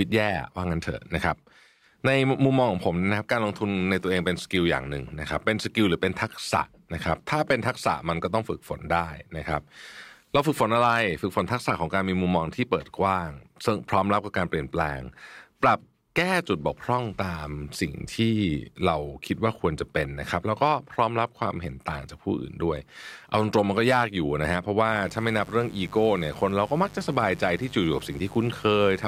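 A switching device on the mains, such as a dimmer or rectifier, or a missing shield, has let sharp spikes, twice in every 50 Hz mains cycle, into this speech recording, and from 24.9 s to the end at 29.1 s a steady, raspy mains buzz, roughly 20 dB below the speech, sits under it.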